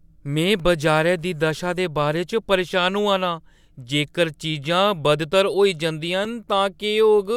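A block of digital silence hits at 0.60 s and again at 6.25 s, each about 2.9 ms long, which fits a 128-sample buffer left unfilled in time. The speech drops abruptly to silence and back, so each gap is heard as a sharp tick.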